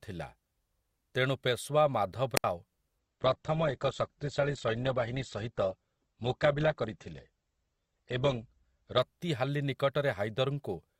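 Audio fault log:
2.35–2.44 s: wireless microphone squelch dropout. Right after "ତେଣୁ ପେଶୱା" the RF signal fades, hiss swells briefly, then the receiver's squelch mutes the output for about 68 ms before speech returns. The hole is near silence.
2.99–8.99 s: adaptive stream at a lower bitrate. For six seconds the player switches to a lower-quality rendition, with nothing above 8.2 kHz and coarser codec artefacts. The abrupt step with no gap points to Opus dropping from roughly 64 to 12 kbit/s.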